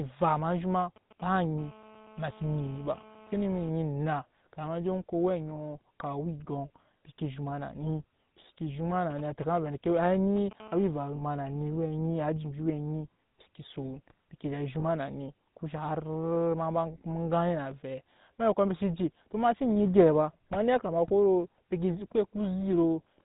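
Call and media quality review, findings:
GSM full-rate codec, whole clip: heavy low-rate coding, consistent with the 13 kbps full-rate codec. Vocal-tract model driven by sparse regular pulses, nothing above 4 kHz. Speech has plainly audible buzzy, gravelly roughness and a dull, band-limited top end throughout.

GSM signalling bursts, 0.49–1.59 s and 9.10–10.62 s: a nearby 2G phone is signalling, and its short radio burst groups are rectified in the audio circuit. Audible as galloping ticks and brief 217 Hz buzzes, faint in the first stretch and noticeably louder in the second.

GSM phone buzz, 1.59–3.69 s and 10.62–11.86 s: the same phone is in a call, transmitting 217 bursts a second that are picked up and rectified. Each stretch follows straight on from the signalling. Hard, raspy 217 Hz buzz with many harmonics, unrelated to the speech, about 23 dB below the speech, then about 27 dB.

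Lost GSM frames, 5.56–5.59 s, 11.16–11.21 s and 14.80–14.85 s: bad frames are concealed by repeating the last good frame's settings. Each sounds like a brief rough, metallic ring of about 20 ms, consistent with a single lost frame. The second falls inside the buzz.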